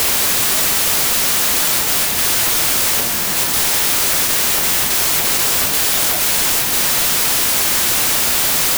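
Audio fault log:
Throughout, wrong sample width: audio packed as 24-bit samples is being read as 32-bit, so every value is built from a mix of bytes belonging to neighbouring samples. Only some values line up with the true top bits. A harsh wall of loud noise results, with the original buried inside it, running about 1.33 times too fast and pitched up to match. Steady hiss or clipping would not do this. This is a byte-level mismatch, which is why the noise is so dense and the speed and pitch are both shifted.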